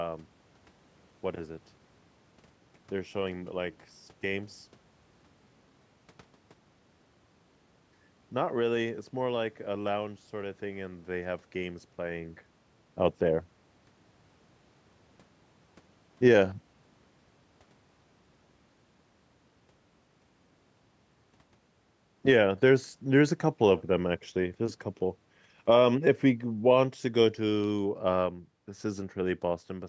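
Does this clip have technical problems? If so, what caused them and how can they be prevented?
Yes. Automatic gain falling occurs from 13.21 to 16.43 s, about 3 dB down, and from 22.14 to 29.28 s, about 7 dB down. The speech and room noise sink together as the gain control, treating the input as too hot, eases its gain back. Lowering the input gain at the source gives the control no reason to back off.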